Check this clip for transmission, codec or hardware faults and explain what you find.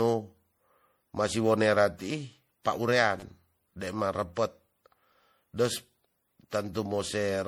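Two faults are audible. Generation loss runs throughout: the speech sounds swirly, hollow and smeared, with blurred attacks, likely from repeated lossy re-encoding, around five MP3 passes at a rate near 64 kbit/s, each adding fresh quantisation noise. A repeated buffer occurs at 3.20 to 3.23 s: a short chunk, consistent with a 10 ms buffer, plays three extra times, giving a brief buzzy stutter with hard joins.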